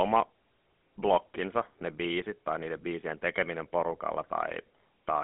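From start to finish, the speech carries the sound of the GSM full-rate codec. The band is squeezed to a telephone line, roughly 200 Hz to 3.5 kHz, and nothing reaches past about 3.9 kHz, so sibilants are dulled and air is gone. The coder rebuilds the voice from a vocal-tract model excited by sparse, evenly spaced pulses, which fits a 13 kbps full-rate stream, and the damage is plainly audible as a buzzy, gravelly roughness.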